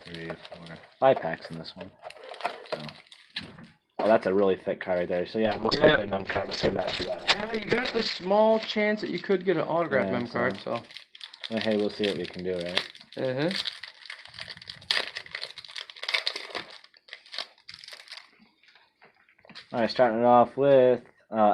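From 5.47 to 10.15 s, a call bitrate drop coarsens coding and lowers the cut-off from 16 kHz to 8 kHz; the sound turns rough and muffled.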